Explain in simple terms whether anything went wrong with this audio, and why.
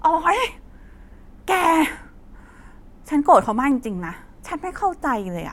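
At 3.72 seconds there is a single sharp click in the speech, over in an instant. This is most likely a case of dropped samples: a tiny fraction of a millisecond of the recording went missing, so the sound wave jumps straight from one point to a later one instead of moving smoothly between them. Far too little is lost for any of the speech to disappear, but that abrupt jump is what the ear hears as a click.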